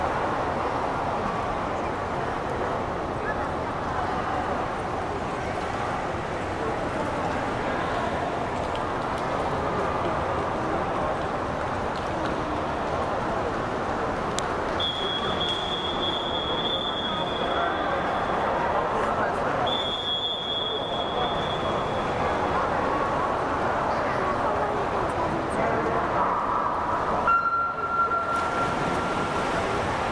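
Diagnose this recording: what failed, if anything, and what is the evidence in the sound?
A file header played as audio shows up as a single sharp, loud snap at 14.39 s, lasting about a millisecond. The failure is at the storage or file-joining stage. Two WAV pieces were concatenated with the second piece's header left in place, so a few dozen bytes of format metadata were read as sample values. Unlike a buffer underrun or dropout, there is no missing audio or gap around the click. It happens once, at a joint, with no repeating spacing.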